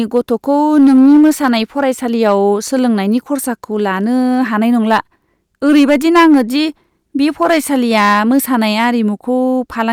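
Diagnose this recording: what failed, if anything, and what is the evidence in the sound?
Hard clipping puts harsh, crackling fuzz on loud speech at 0.16–1.85 s, 2.22–2.35 s, 4.91–4.98 s and 5.66–6.59 s. Gain overdrives a converter or format stage by about 3–7 dB, flattening peaks.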